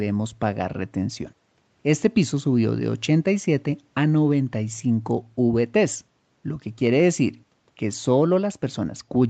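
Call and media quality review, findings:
No faults found in this call.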